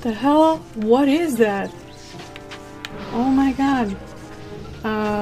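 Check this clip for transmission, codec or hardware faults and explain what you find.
No faults turn up anywhere in the clip.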